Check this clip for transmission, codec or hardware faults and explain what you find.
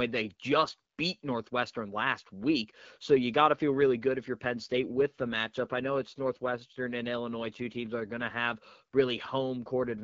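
One fault appears twice in this speech: an AMR rate drop. From 4.52 to 8.40 s and from 9.66 s to the end, a weak link pushes the codec to a lower rate, which fits a drop from 12.65 to 8.85 kbit/s. The voice turns rougher and more synthetic. The spectrogram keeps the same band with no gap, and the waveform stays continuous.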